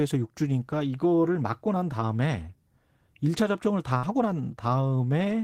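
At 3.97 s the speech breaks up in a burst of packet loss lasting until about 4.06 s. A short run of packets failed to arrive in time, so the receiver concealed the gap by extending the last decoded sound for roughly 54 ms while lowering its level, which is heard as a brief held buzz or fading hiss. When audio resumes, about 60 ms of the original speech has been skipped, leaving a small jump in the flow.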